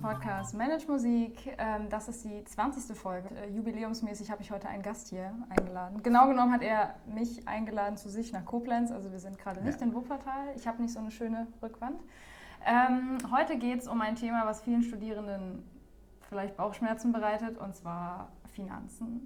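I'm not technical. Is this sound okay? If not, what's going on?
No. At 3.27 s there is a skip ahead: nearly half a second of sound is simply missing, and playback jumps straight to later material. Unlike a dropout, there is no silence or gap. The two sides are stitched together almost seamlessly.

Right after, from 3.41 to 5.05 s, comes a jitter buffer speed-up. To catch up on built-up delay, the player snipped out many tiny slivers, about a tenth of a second in total, so the sound runs roughly 7% fast and feels hurried. The pitch stays the same, which is what separates it from a tape played too fast.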